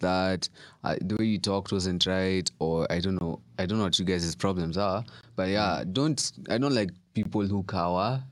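Gaps between chunks interrupt the speech at 1.17–1.19, 3.19–3.21, 5.21–5.23 and 7.23–7.25 s. Each hole lasts about 21 ms, spaced every 2.0 s. The audio arrives in 2-second chunks with silence left at each join. You hear brief dropouts at a steady rhythm.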